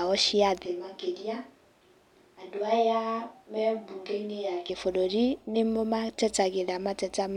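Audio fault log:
0.66–4.69 s, switch to a distant microphone: speech abruptly turns roomy, hollow and bass-light, about 5 dB quieter with more room noise, likely from the close microphone dropping out.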